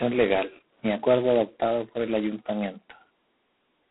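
From start to finish the speech carries G.726 ADPCM damage, and it's heavy. The coder sends only the difference between each sample and its own adaptive guess, and with so few bits per sample the guess errors turn into a coarse, rasping hiss that swells and fades with the voice itself. That roughness fits the 16 kbit/s mode. The band sits at telephone width, roughly 150 Hz to 3.4 kHz, and nothing at all survives above 3.9 kHz.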